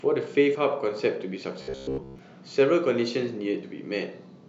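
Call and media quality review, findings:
Compressed frames skipped at 0.54 s and 3.62 s: brief smeared blip, about two 26.1 ms frames (roughly 50 ms) lost, which fits dropped or decoder-rejected lossy frames.

Robotic sound from repeated short buffers, 1.62–2.19 s: rigid metallic buzz at 66.8 Hz, most of the audio replaced by repeats. Likely buffer underrun looping roughly 15 ms blocks.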